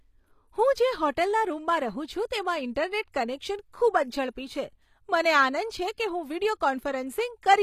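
Speech runs through HE-AAC compression for its whole length, likely from a 24 kbps-class stream. Sibilants sound gritty and lispy because the treble is replicated rather than coded, yet it stays bright up to 14.9 kHz, unlike a plain low-pass that would sound dull.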